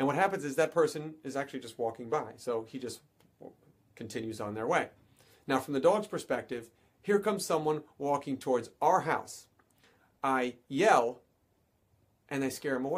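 No technical faults can be heard anywhere in the audio.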